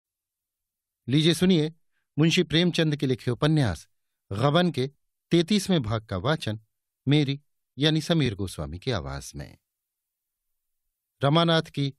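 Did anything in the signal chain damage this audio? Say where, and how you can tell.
Yes: brief stutters at 3.24–3.26 s and 8.26–8.28 s, 5 seconds apart, replay about 21 ms twice. These are overlapping chunks at the buffer stage, where each block starts early.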